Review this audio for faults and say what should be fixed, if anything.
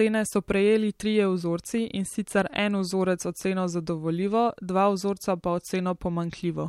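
From 1.24 s to the end of the speech at 6.68 s there is channel delay (comb filtering): one channel lags the other by roughly a single sample, a few hundredths of a millisecond, and the mono sum cancels near 20 kHz. This costs only the extreme top end, a slight dulling of air and sibilance. Unlike a flanger, the notch stays fixed, and unlike a deliberate low-pass it appears abruptly partway through. Align channels sample-accurately before any mono fold-down.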